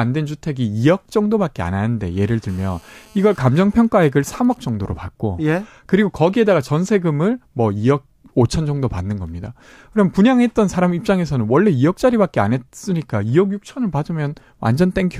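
GSM phone buzz sits under this speech from 2.49 to 3.39 s: a hard, raspy 217 Hz tone with a dense stack of harmonics, about 31 dB below the speech. A nearby 2G handset on a call was pulsing its transmitter, and the audio circuitry rectified those radio bursts into sound. GSM signalling bursts follow from 3.49 to 4.69 s, even ticks with a longer 217 Hz buzz twice a second, roughly 30 dB down. A nearby handset, in a call but with its user silent, was sending only sparse groups of bursts, which the circuitry again demodulated.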